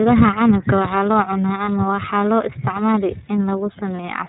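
Throughout, the speech carries the iLBC codec's signature: the band stops at 4 kHz, and each 30 ms block's excitation is coded on its own, giving a plainly audible rough, slightly synthetic edge consistent with the 13.33 kbps mode. At 1.65 s and again at 3.96 s, lost iLBC frames appear. Each gap is about 30 ms, which fits a single missing frame. The decoder repeats the last pitch cycle mixed with noise, producing a brief buzzy, held-vowel smear before clean decoding resumes immediately.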